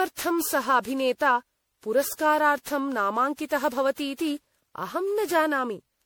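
Generation loss runs throughout the speech, sounding swirly, hollow and smeared. Attacks blur. It likely comes from roughly fifteen MP3 passes near 96 kbit/s.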